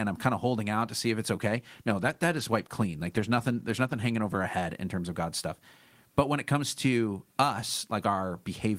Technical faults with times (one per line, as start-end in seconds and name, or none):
1.42-4.49 call bitrate drop